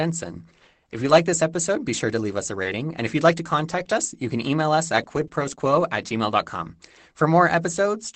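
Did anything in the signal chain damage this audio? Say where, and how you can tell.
Yes. The damage happened at the network stage, between 1.05 and 5.81 s. It shows up as scattered short gaps: about five brief ticks and smears, none longer than roughly 20 ms, adding up to around a tenth of a second. Packets went missing or arrived late. The receiver filled each hole by extending the last sound, which is why you hear hiccups rather than silence. The call path around them, an Opus codec limited to an 8 kHz band, is not the cause.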